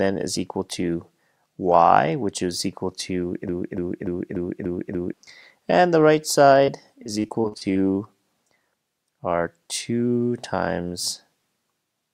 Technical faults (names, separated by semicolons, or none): broken-record loop; repeated packet loss (robotic sound)